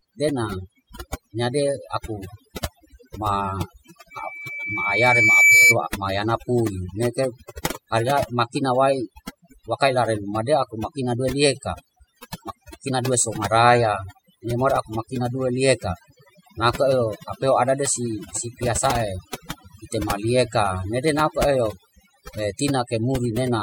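Overdone noise removal runs through the whole speech clip. The suppressor pulls individual frequency bands down whenever they sit near its noise estimate, so the background drops and breaks up into twinkling specks, and quieter speech components vanish.

From 4.11 s to 5.76 s, just before "mayana pui", a loudspeaker feedback squeal appears. The microphone hears its own loudspeaker, and loop gain exceeds unity at 2.3 kHz. That single tone swells over about a second and a half to roughly 10 dB above the speech.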